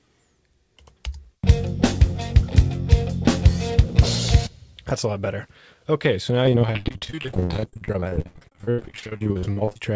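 From 6.44 s to 9.91 s there's repeated packet loss (robotic sound): dozens of short holes, the longest about 87 ms, each patched by stretching the last bit of audio. About half that stretch is concealment, so it turns choppy, with the usual 8 kHz ceiling of a wideband call codec like G.722.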